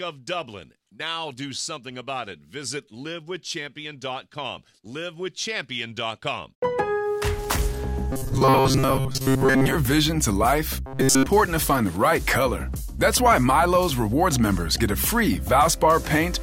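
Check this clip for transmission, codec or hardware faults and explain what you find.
Robotic sound from repeated short buffers occurs at 8.11 to 9.76 s and 10.87 to 11.26 s. Audio likely arrived too seldom, so a roughly 7.5 ms segment was replayed over most of the first span and all of the second, forcing a rigid, metallic 133 Hz buzz.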